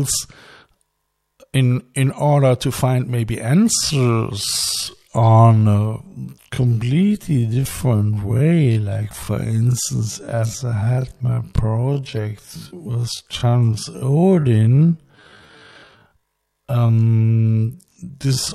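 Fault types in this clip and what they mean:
Time-stretched section: after "order to find maybe", from 3.71 s to the end, the speech suddenly runs at half its pace while its pitch stays put, so it drags. The likely cause is software lengthening the audio by repeating short pieces to keep pitch.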